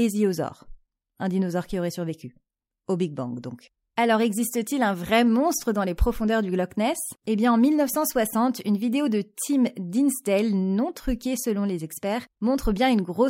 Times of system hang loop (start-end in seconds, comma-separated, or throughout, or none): none